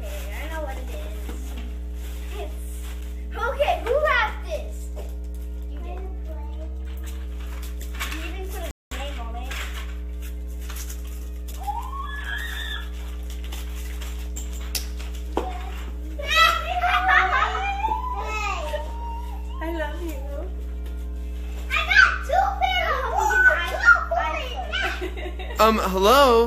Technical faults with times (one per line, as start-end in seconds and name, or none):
0.00-26.47 mains hum
6.29-7.25 drift correction step
8.71-8.91 rebuffering stall